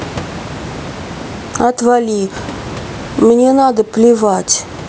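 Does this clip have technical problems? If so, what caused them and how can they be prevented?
Yes. Gain pumping runs throughout this speech. The gain ducks by around 15 dB under loud syllables, likely from excessive mic gain driving a fast limiter. Lowering the input gain so the limiter rarely engages prevents it.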